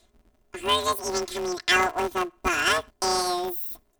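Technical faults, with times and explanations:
Throughout, planar audio read as interleaved: the speech carries a robotic buzz at about 172 Hz, with no clear octave jump. Each short stretch, about 5.8 ms, which fits 256-sample blocks, has its left samples stored first and its right samples after, but it's being read as alternating pairs. So every block plays twice at double speed, left then right. Because the blocks are so short, you hear the block rate as a buzz rather than a pitch shift.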